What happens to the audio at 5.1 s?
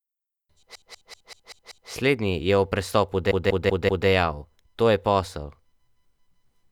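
Nothing goes wrong at 5.1 s; the speech runs on intact through that moment.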